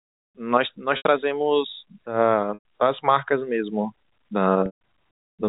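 Speech with three brief buzzy, held-over stretches, at 0.97 s, 2.54 s and 4.66 s, the longest fading toward silence. This is packet loss with pitch repetition: gaps of 80, 110 and 150 ms were filled by repeating the last pitch period, under narrowband G.711 telephone coding.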